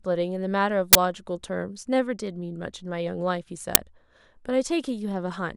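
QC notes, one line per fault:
0.93–0.95 s and 3.75 s: uninitialised buffer, brief loud bursts of digital noise where stale memory played as audio. They fit 1024- and 512-sample buffers and show as sharp waveform spikes and broadband vertical spectrogram stripes.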